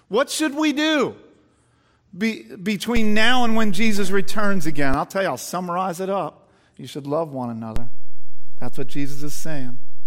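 DC steps occur at 2.97 s and 7.76 s: the waveform's zero line jumps by about -12 dBFS, then about -11 dBFS, each heard as a low thump. The first offset holds until 4.94 s, thumping again as it drops back; the second persists to the end, while the speech continues unchanged.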